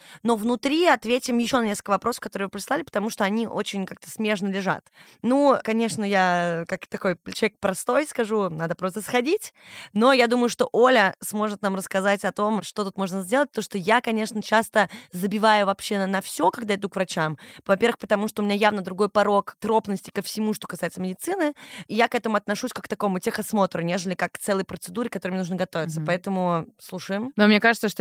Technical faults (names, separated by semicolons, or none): none